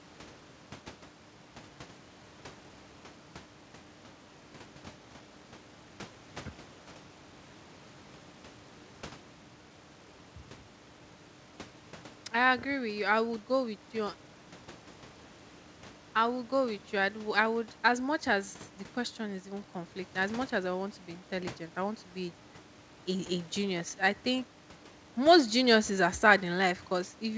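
Speech clip, no faults heard.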